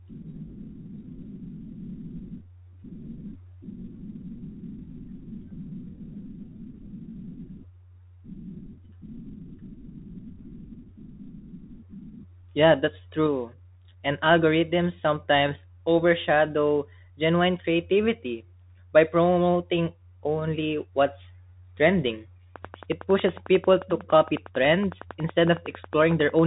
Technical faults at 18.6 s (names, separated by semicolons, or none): Bluetooth CVSD headset codec